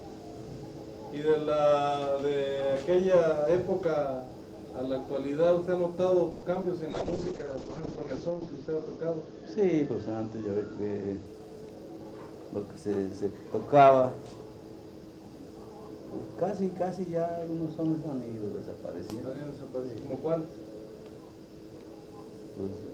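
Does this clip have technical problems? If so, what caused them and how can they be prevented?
Yes. Four kinds of fault cluster between about 6.3 and 12.1 s.

At 6.31 s the sound stalls for 110 ms. The last sound is stretched into a fading buzz or hiss until 6.44 s. Then the audio resumes where it stopped, so nothing is lost but everything after arrives 110 ms later. This is likely a call audio freeze: delayed packets let the jitter buffer run dry, and the receiver filled the wait. Prevention: fix network congestion and allow a slightly deeper buffer.

Two short concealed packet losses follow. They run from 6.54 to 6.57 s and from 6.61 to 6.64 s. In each, 20 ms of audio never reached the decoder in time. The receiver covered the hole by extending the previous sound for about 10 ms and then blending back. Each one is heard as a brief smear or wobble. Prevention: enable forward error correction so lost packets can be rebuilt.

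A call bitrate drop runs from 6.91 to 11.31 s. The encoder's rate falls from 48 to 7 kbps and holds at its lowest for about 1.3 s. Coarser coding makes the sound rough and watery. The bandwidth also shrinks from 20 kHz to 8 kHz, which muffles the top end. Prevention: give the call steadier bandwidth, or limit competing traffic on the link.

A jitter buffer speed-up follows from 11.11 to 12.12 s. The buffer was holding too much delayed audio. To catch up, the receiver cut out short pitch-period slices, removing about 150 ms in total. Playback runs at 112% speed with unchanged pitch, so the sound feels hurried. Prevention: avoid delay bursts so the buffer never overfills.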